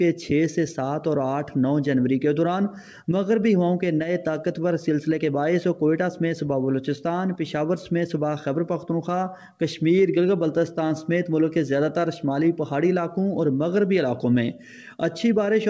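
No technical faults are audible anywhere here.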